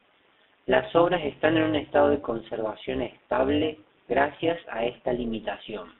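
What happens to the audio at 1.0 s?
Overlap-add ripple runs through the whole clip: frames are rejoined with a mismatched overlap, so the level pulses by about 11 dB roughly 200 times a second, a metallic buzz with extra tones around each note.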